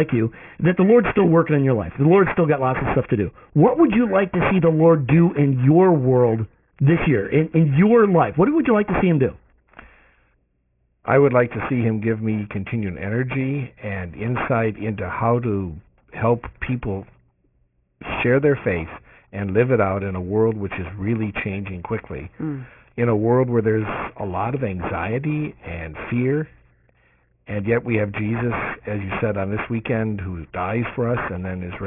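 Aliasing runs through the whole clip. The speech was downsampled to what sounds like a 6 kHz rate with no low-pass first, so everything above 3 kHz folds back down as wrong, unrelated tones, sitting roughly 15 dB under the speech and making the sibilants gritty and metallic.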